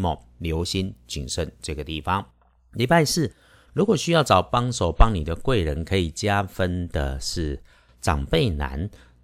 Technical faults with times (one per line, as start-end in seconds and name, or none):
none